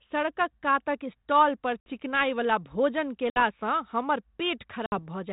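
Packet loss on an ADPCM call hits at 1.80 s, after "कातक स्टाल पर", then at 3.30 s and 4.86 s. Each drops about 60 ms, a few packets, to hard-edged silence. The decoder's predictor then loses sync. Speech returns slightly distorted, settling within tens of milliseconds.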